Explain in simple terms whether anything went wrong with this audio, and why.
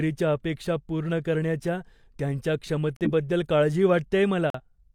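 The speech drops to sudden silence twice, at 2.97–3.08 s and 4.50–4.60 s. Each is a corrupt frame muted: damaged compressed data was rejected, and silence replaced it.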